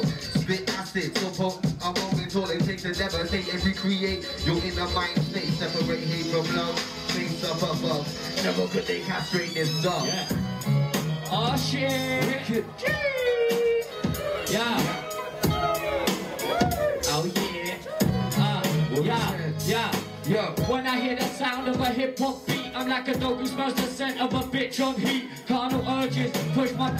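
No technical faults can be heard anywhere in the signal.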